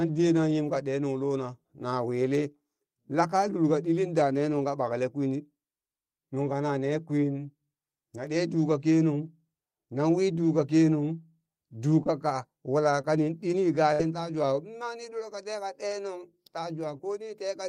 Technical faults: short concealed packet loss; burst of packet loss

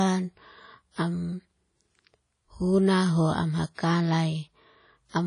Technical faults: WMA compression; pre-echo

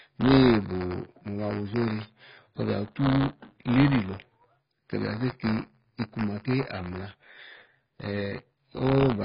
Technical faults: buffer tearing; AAC compression

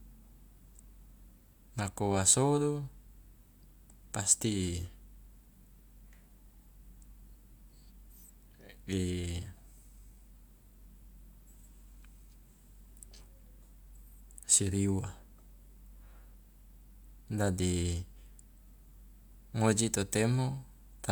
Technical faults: none

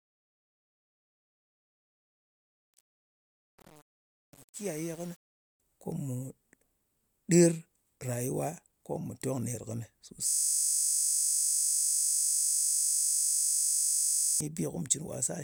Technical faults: truncation distortion on a fade; system hang loop

